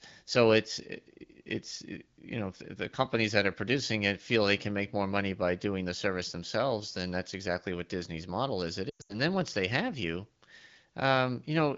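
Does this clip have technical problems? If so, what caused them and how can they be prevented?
Yes. Lost AMR speech frames occur between 8.90 and 9.16 s, after "disney's model is it" and before "then once they have." About 180 ms of audio is missing across roughly 200 ms, which fits about nine 20 ms frames, with the longest gap around 100 ms. Frames that failed their checksum were replaced by the wideband decoder's concealment, which repeats the last good pitch and vocal tract settings at falling gain. The result is a smeared, fading dropout before the speech returns. Prevention requires a stronger radio link, for example better coverage or a lower, more robust AMR-WB mode, so fewer frames arrive corrupted.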